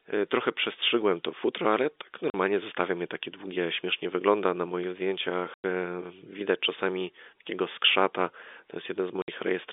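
At 2.3 s, between "to futro ale tak" and "zostawiam je takie długie", the speech drops out for 40 ms. This is packet loss filled with silence. Audio went missing in transit, and the receiver played silence in its place. Two more holes follow: 100 ms at 5.54 s and 60 ms at 9.22 s. Each length is a multiple of 20 ms, which fits 20 ms packets. The gaps start and stop abruptly.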